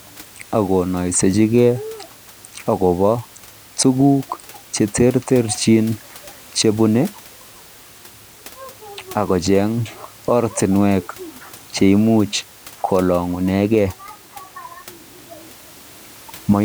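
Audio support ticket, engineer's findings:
No system fault found on the speech clip; the audible room noise sits about 25 dB below the speech and is part of the recording.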